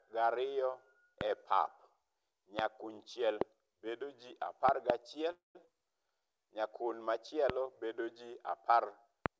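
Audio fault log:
1.21–1.23, 2.59–2.61, 3.41–3.44, 4.69–4.92 (two pops), 7.50–7.52 just before "bedo ji", 9.26–9.28 s: loud pop. A sharp transient peaks about 20 to 25 dB above the sound, likely an electrical pulse, and shows as a thin vertical spike on waveform and spectrogram.
5.32–5.56 s: call audio freeze. Packets were delayed, likely leaving the buffer empty. The sound stretches into a fading buzz, then about 140 ms of flat silence, and resumes with nothing lost.
5.66 s: skip ahead. About 150 ms of audio is dropped and playback joins almost directly, leaving an abrupt waveform splice with almost no gap.
5.72–6.96 s: jitter buffer slow-down. Repeated pitch periods add 152 ms, so the sound plays at 88% speed at unchanged pitch, with stretched, repetitive harmonic bands on the spectrogram.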